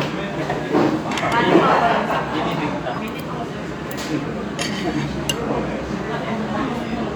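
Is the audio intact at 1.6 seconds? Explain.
Yes, the audio is intact at 1.6 seconds, with no fault or interruption at that point.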